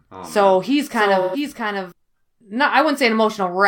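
Doubled audio track, from the start to 1.92 s: a second full-band copy trails by roughly 0.7 s, about 5 dB quieter, likely from a slower capture path, then stops abruptly.

AAC frame loss with concealment, 1.21 to 1.36 s: a 128 ms gap, which fits three lost frames, is filled from the previous spectrum, leaving a smeared, phasey patch.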